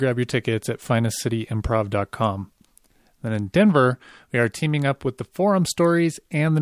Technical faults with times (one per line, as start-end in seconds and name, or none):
none